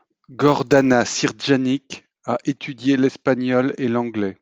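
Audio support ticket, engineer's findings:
Block size mismatch (truncated), 0.0 to 0.92 s. Buzz at 100 Hz over the speech. Pitch normal, pace normal. The upstream stage writes blocks slightly longer than the next stage reads. The tail of each block is dropped, giving a discontinuity every 10 ms. That points to a 10 ms processing block. Too little is dropped to speed up the audio. Check block sizes between the capture and processing stages.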